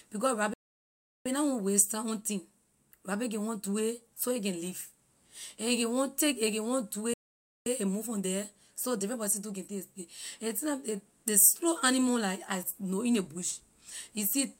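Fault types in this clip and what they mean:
Playback stall: the speech drops to silence mid-flow twice, for 0.72 s at 0.53 s and 0.52 s at 7.13 s, after "a can want do". It resumes with "na want waste time" and "a move from the". The player likely ran dry or was blocked.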